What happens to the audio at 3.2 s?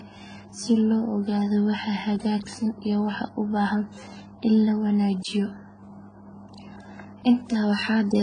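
At 3.2 s the speech carries the same layered coding damage heard across the whole clip, which points to transcoding between lossy codecs, likely a low-rate AAC pass re-encoded into WMA. Artefacts from the first stage blend with the second codec's artefacts, and nothing sounds above 9.7 kHz.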